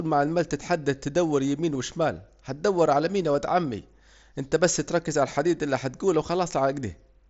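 At 1.74 s, between "عمال تحدد تدور يمين" and "وشمال هتدور على مين", there's a brief concealed Bluetooth headset packet loss. About 7.5 ms of audio went missing between headset and phone, and the receiver patched the gap by repeating a matching slice of the waveform just before it, so it's nearly invisible. At 3.33 s, between "هتدور على مين يا" and "عمي انت بس ركز", a 15 ms gap gets the same repair and leaves a buzzy flicker. Under both sits the mSBC wideband headset codec's light graininess.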